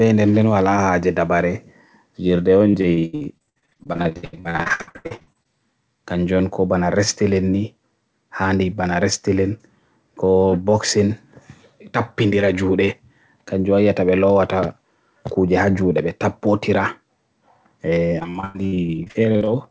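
Speech with repeated packet loss, giving a robotic sound, from 2.70 to 5.47 s and again from 18.19 to 19.49 s. Dozens of short holes, up to 79 ms and 101 ms long, are patched by stretching the last sound, leaving roughly half and a third of those stretches synthetic. Unlike one isolated dropout, the gaps recur rapidly, producing a choppy, robotic sound. The band stops near 8 kHz, which fits a G.722 call path.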